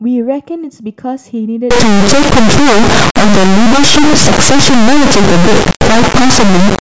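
From 1.71 s to the end, the speech gives way to an integer read as float fault. The samples were written as 32-bit integers but interpreted as 32-bit floats, so their bit patterns turn into values that are either vanishingly small or wildly beyond full scale. The output snaps between silence and the clipping limit, a harsh, extremely loud square-wave buzz. Unlike ordinary overload clipping, the original waveform is no longer recognisable underneath.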